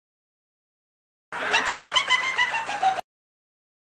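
From 1.67 s to 1.93 s the audio breaks off and the last sound is stretched into a fading buzz for about 240 ms, never dropping to silence. It then resumes with that stretch missing, which points to a likely long network dropout concealed by the receiver.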